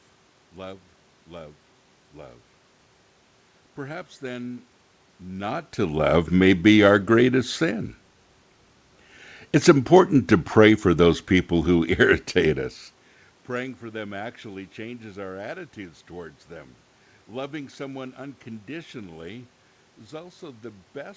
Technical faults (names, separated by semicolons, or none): none